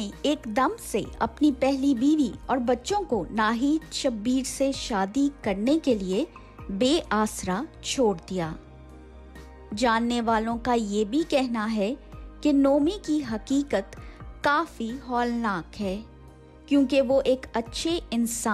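No audible technical faults.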